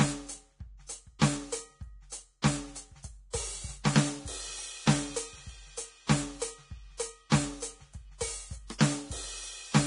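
A music clip with heavy Vorbis compression throughout: the treble stops dead at about 10.6 kHz, and the top end is grainy and hissy, with roughened tones, a degree of damage that fits a bitrate near 30 kbps. This is likely low-quality Vorbis encoding, not broadband noise, because the grit follows the music's own spectrum and vanishes above the cut-off. From 7.30 to 7.32 s there is pre-echo: a brief hiss spread over about 21 ms ahead of a sharp attack, which arrives softened. Unlike a click or dropout, this noise leads into the transient, because quantisation noise fills the quiet start of the codec block.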